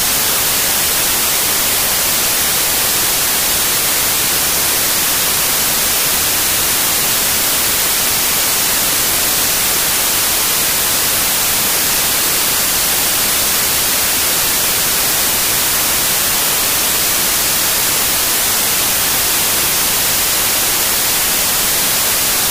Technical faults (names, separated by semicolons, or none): wrong sample width